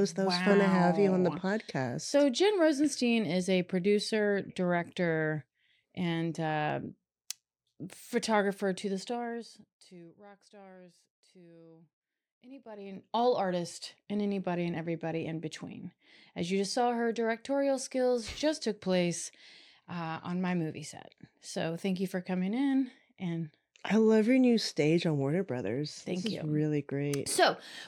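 From 8.96 to 10.22 s, after "photographer to the", zipper noise ticks as the level falls roughly 25 dB in 1 dB steps, about twenty a second. It returns from 12.49 to 13.24 s as the level climbs back.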